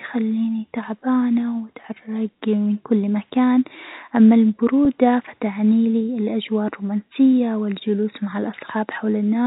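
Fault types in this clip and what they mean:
Packet loss with pitch repetition: a single 10 ms gap in the speech at 4.85 s, consistent with one lost packet, is filled by repeating the last pitch period, so the sound briefly holds with a faint buzz before resuming through the band-limited telephone path.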